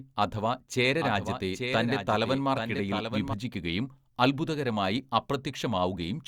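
From 0.83 s to 3.33 s the speech carries a doubled audio track: a second full-band copy runs roughly 0.7 s behind, about 5 dB quieter, then cuts in and out abruptly at those points. The likely cause is the same signal being captured again through a slower path. Unlike an echo or reverb, the lagging copy has no decay, no room colour and no repeats, so it sounds like a second, clean overlapping take.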